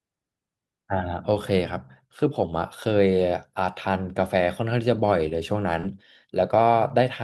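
At 5.81 to 5.85 s the speech briefly smears and wobbles. This is short concealed packet loss: about 20 ms of audio arrived too late, so the receiver extended the preceding sound to cover the gap before blending back.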